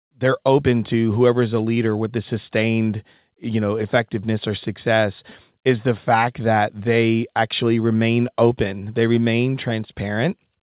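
Short concealed packet loss hits at 1.75 to 1.77 s, after "to whoever is a", and again at 5.3 s, before "is the fact that". About 10 ms of audio never arrived each time, so the receiver extended the preceding sound to cover it, leaving a brief smear or wobble within the narrowband, 4 kHz-limited G.711 sound.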